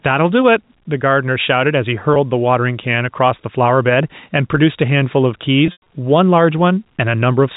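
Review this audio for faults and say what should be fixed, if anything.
Gain pumping runs through the whole clip. The input gain is likely set far too high for the microphone, so a fast limiter or compressor clamps down on every loud syllable and releases in the gaps. The level swings by around 5 dB. Loud and quiet parts end up squashed together. Lowering the input gain so the limiter rarely engages, or slowing its attack and release, would prevent this.

Packet loss with pitch repetition occurs twice. From 2.14 to 2.16 s, a roughly 20 ms gap was bridged by repeating the last pitch period, heard as a brief, slightly held buzz. From 5.66 to 5.80 s the loss is heavier: 140 ms missing across about 200 ms, with the longest run 100 ms, which points to several consecutive packets. The repeated cycle fades toward silence before the speech returns through a short cross-fade. The G.711 A-law telephone band-limiting stays clean around both gaps. 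A larger jitter buffer and a more stable network path, or forward error correction, would prevent these dropouts.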